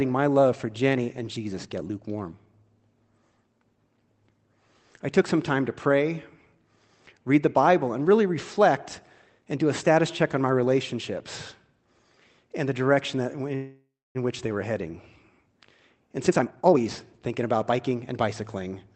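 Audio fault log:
13.55–14.17 s: call audio freeze, likely from held-up packets; last sound continues as fading buzz or hiss, then about 0.28 s of flat silence in the waveform, nothing lost.
16.23–18.03 s: jitter buffer speed-up; pitch periods repeatedly cut, roughly 0.7 s removed, speech runs 133% fast at unchanged pitch; spectrogram shows compressed timing, steady harmonics.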